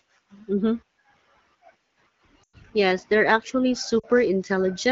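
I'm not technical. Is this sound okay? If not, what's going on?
No. Lost AMR speech frames at 2.43 to 2.56 s and 4.00 to 4.05 s: radio errors spoiled short pieces of the phone signal, so the decoder stretched out the last good sound while fading it. Listeners hear the speech briefly smear and dip.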